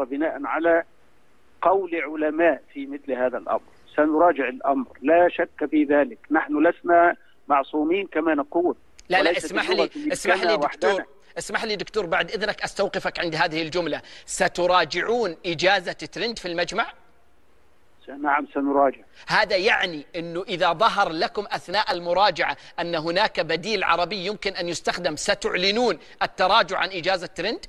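No technical faults are audible anywhere in the recording.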